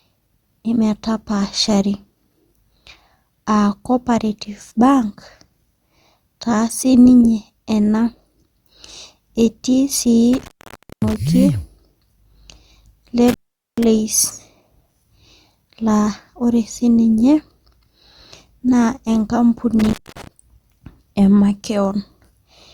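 Speech with intermittent contact at 10.33–11.16 s, 13.28–13.84 s and 19.79–20.27 s. A loose connection opens for about 0.55, 0.43 and 0.23 s, and the crackle at each edge sets it apart from clean digital dropouts.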